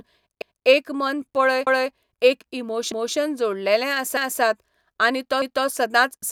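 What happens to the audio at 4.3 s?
Around 4.17 to 4.42 s there's an overlapping chunks glitch: a new one-second chunk starts early, so about 250 ms of speech plays twice, giving a quick stutter.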